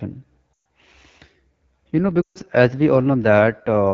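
Throughout, the speech carries the AMR wideband (HD Voice) codec's sound. Harmonics are modelled up to 6.4 kHz. Above that is shaped noise. The result is rough and raspy, plainly audible, which fits the low 8.85 kbit/s mode.

At 0.54 s, lost AMR speech frames cause a drop to near silence lasting to 0.57 s. A longer run follows at 2.22 to 2.38 s. There the sound drops to near silence within two frames. The decoder reused old pitch and vocal tract settings with falling gain. Speech then returns weak or rough for a moment.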